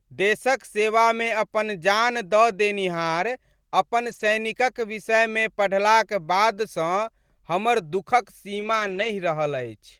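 Lost packets rebuilt from error correction occur at 4.07 to 4.29 s and again at 8.55 to 9.09 s. Each time, packets went missing, but the following packet carried a low-bitrate backup copy, so the decoder filled the hole rather than leaving silence. The speech runs on without a gap, yet turns rougher and grainier, about 120 ms of it in the first stretch and about 280 ms in the second, which points to more lost packets in the second.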